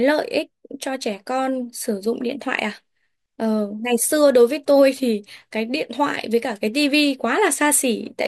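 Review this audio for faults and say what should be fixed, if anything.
Nothing in the recording needs fixing. No faults turn up at any point, so no changes are called for.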